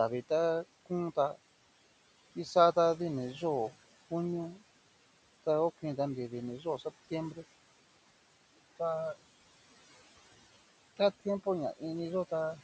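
From 6.60 to 6.86 s there is speech cut by the noise suppressor. The suppressor misjudged part of the speech as background noise and pulled it down along with the room noise, which sits about 20 dB below the speech. The deepest drop is about 9 dB, and roughly a tenth of a second of speech within that span is affected, so those sounds come across as swallowed and fainter than the surrounding speech.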